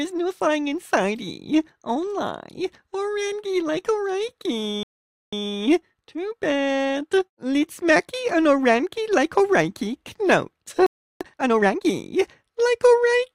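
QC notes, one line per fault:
4.83–5.33 s, playback stall: the sound cuts to silence for about 0.49 s, then resumes. The player likely ran short of data.
5.33–7.29 s, time-compressed catch-up: the audio runs at 1.25 times speed, pitch unchanged. Small cross-faded cuts shorten the backlog.
10.86–11.21 s, playback stall: silence again for about 0.34 s before the sound continues, likely from a blocked or starved playback thread.
11.21–11.89 s, time-compressed catch-up: a shorter burst at 1.5 times speed. It sounds more hurried as the backlog is trimmed.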